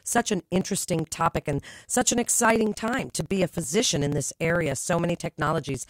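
Periodic USB or driver dropouts run from 0.07 s to 5.80 s, repeating every 0.054 s through the speech. At each interval something stalls the audio path and about 10 ms of signal is skipped outright rather than filled, so the waveform jumps across the gap. Around a hundred of these small cuts produce a steady ticking or buzzy roughness riding on the speech, audible only where there is sound.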